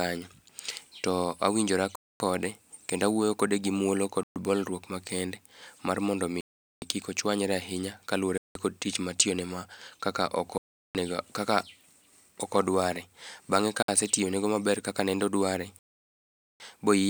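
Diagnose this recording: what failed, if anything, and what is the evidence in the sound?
The playback stage failed, most likely Bluetooth stalls on the wireless link. The speech drops to dead silence seven times: at 1.95 s for 0.25 s, 4.23 s for 0.13 s, 6.41 s for 0.41 s, 8.38 s for 0.18 s, 10.58 s for 0.37 s, 13.83 s for about 60 ms, and 15.79 s for 0.81 s. Each time the sound just stops and resumes, which is what happens when the headphones' buffer runs empty while packets held up by interference get resent.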